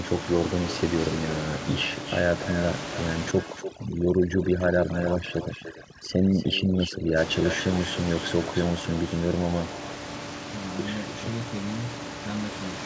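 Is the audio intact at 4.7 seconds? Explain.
No. At 4.7 s the audio sits inside a stretch of overdone noise removal running from 3.31 to 7.18 s. A noise reducer pushed too hard is switching individual frequency bands down or off whenever they come close to its noise estimate, so the background collapses into near silence with twinkling specks, and the softer parts of the speech are stripped away with it. On a spectrogram the gaps between syllables turn almost black, dotted with isolated short bright flecks, and the speech harmonics look ragged and patchy.

Echo with no canceller is also present at this moment, as it is across the whole clip. The far end plays the call through a loudspeaker, its microphone picks that up, and nothing removes it, so every phrase returns roughly a third of a second later at about 13 dB below the speech, sounding quieter and thinner. On a waveform each burst of speech trails a smaller delayed copy of itself. 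On a spectrogram the same syllable shapes repeat faintly just after the originals.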